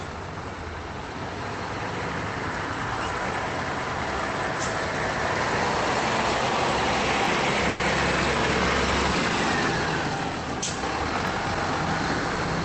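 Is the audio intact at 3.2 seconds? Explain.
No. Between 3.23 and 3.25 s there are overlapping chunks: the audio was handled in 4-second blocks, and the next block began slightly before the previous one had ended, so about 21 ms of sound at the join is played a second time. That doubled sliver breaks the flow at the seam and is heard as a brief stutter or click, a small hiccup where the same instant of sound repeats.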